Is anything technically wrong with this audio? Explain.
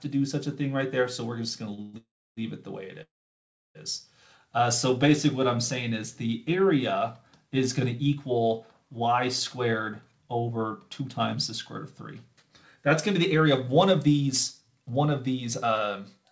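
Yes, there are three kinds of fault: a brief stall, a run of freezes early on, and two stretches of jitter buffer speed-up later. The sound has passed through a call path whose codec leaves nothing above 8 kHz, which fits G.722 at 64 kbps.

Short stall from a late packet, 1.74 to 1.80 s: a packet arrived late and the jitter buffer emptied, so the receiver held the last sound for about 39 ms until the packet arrived, then carried on from the same point. Nothing is lost, but that moment is drawn out, with a faint buzz or dip.

Call audio freezes, 1.82 to 1.95 s, 1.97 to 2.39 s and 3.03 to 3.77 s: these are likely caused by packets held up in transit, which let the jitter buffer run dry each time. The receiver extends the last sound as a fading buzz or hiss. The first freeze lasts about 116 ms with no silence. The second runs 394 ms, of which 300 ms is silent, and the third runs 722 ms with 680 ms silent. 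Playback then resumes where it stopped, so gaps are inserted and nothing is lost.

Jitter buffer speed-up, 9.64 to 11.35 s and 12.33 to 16.25 s: the buffer had built up more delay than its target, so the receiver trimmed many tiny pitch-period slices to catch up. The first stretch plays at 108% speed and removes roughly 150 ms. The second plays at 107% and removes roughly 300 ms. The pitch stays the same, but the sound feels hurried.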